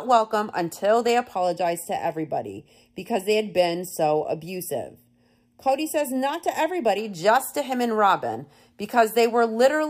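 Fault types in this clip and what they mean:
Channel delay (comb filtering): one channel lags by under half a millisecond, so the mono sum notches out around 1.5 kHz and up, sounding hollow from "welcome until they" to "just to him and".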